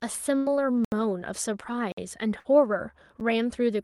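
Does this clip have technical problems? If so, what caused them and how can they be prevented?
Yes. A burst of packet loss hits at 0.37 to 0.49 s and 2.39 to 2.48 s. The receiver stretches the last speech into a fading buzz or hiss for 84 ms and 51 ms, then skips 60 ms. Unlike a dropout, nothing goes dead. A deeper jitter buffer with forward error correction would prevent it.

Blocks of digital silence occur at 0.85 to 0.92 s (74 ms), 1.92 to 1.97 s (54 ms) and 3.20 s (8 ms). The output buffer likely went unfilled, so the audio cuts hard to silence with no fade and no concealment tail. Larger output buffers would prevent this.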